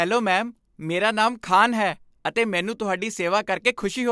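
No technical faults can be heard anywhere in the recording.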